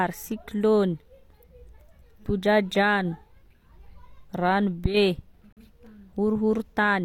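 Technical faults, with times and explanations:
5.53–5.62 s, corrupt frame muted: a compressed frame arrived with flipped bits, the decoder rejected it, and the player filled the gap with silence. The speech cuts out abruptly for about 96 ms, which fits a single lost frame, and resumes on time.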